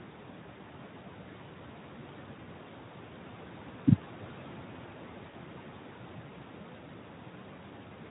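Noise suppressor artifacts run through the whole recording. The suppressor estimates the steady room noise, which sits about 18 dB below the speech, and pulls those bands down frame by frame by about 12 dB. Between phrases the background drops away. Under the speech it comes back, so the floor pumps with the talker.

VoIP packet loss concealed by the speech codec occurs at 3.71 to 3.75 s, where about 20 ms of audio is missing, which fits one lost frame. A second event at 5.29 to 5.34 s covers about 40 ms, consistent with two consecutive frames. In each gap the decoder extends its last pitch and filter state at falling gain, producing a brief stretched tone or coloured noise that fades. The speech just afterwards sounds weak or distorted until the decoder state recovers.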